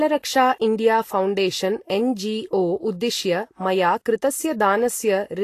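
Throughout the speech, nothing is present above 14.2 kHz, and the remaining treble sounds grainy and hissy, with roughened tones and blurred attacks. The likely cause is Vorbis compression near 34 kbps. Coarse treble quantisation turns detail into noise, whereas a plain low-pass would only dull the top.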